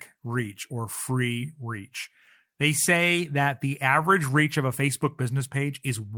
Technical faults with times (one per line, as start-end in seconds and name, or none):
0.00-6.18 clock drift between sender and receiver
0.27-6.06 repeated timing corrections